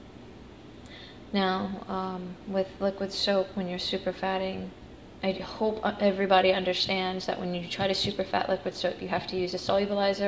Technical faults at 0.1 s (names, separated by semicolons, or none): none